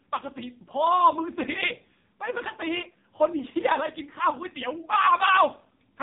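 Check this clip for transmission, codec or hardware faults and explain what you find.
The speech sounds buzzy and synthetic from start to finish, with nothing above 3.8 kHz, which points to an AMR narrowband mobile codec running at a very low bitrate, around 5 kbps. AMR-NB samples at 8 kHz, so the upper band is simply gone. It rebuilds the voice from a vocal-tract model excited by a handful of pulses per subframe. With so few bits, that excitation is coarse, leaving the heavy robotic buzz and thin, muffled quality heard throughout.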